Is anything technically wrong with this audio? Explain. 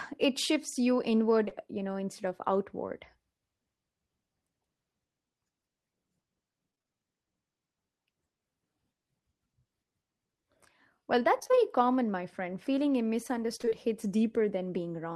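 Yes. The clip, which is speech, has two kinds of network fault.

Short concealed packet loss occurs between "it shifts you" and "you know instead of", as two back-to-back dropouts at 1.45 to 1.49 s and 1.49 to 1.53 s, each about 20 ms of missing audio. The receiver patched each gap by extending the preceding sound, then crossfaded back into the real signal. It comes across as a quick smear or wobble in the phrase. On a spectrogram the harmonics briefly freeze into flat, copied stripes; the waveform shows a repeated cycle with a slight seam at the rejoin.

Repeated packet loss (robotic sound) appears in three bursts: 6.71 to 6.94 s, 11.39 to 11.59 s (just before "common my friend"), and 13.57 to 13.73 s. Each contains four or five holes of up to about 25 ms, so roughly half of each burst is concealment rather than real audio. Constant patching of one gap after another gives a choppy texture with pieces missing. 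A spectrogram shows the harmonic pattern stuttering in blocks with vertical discontinuities, and the waveform looks like short repeated segments stitched together.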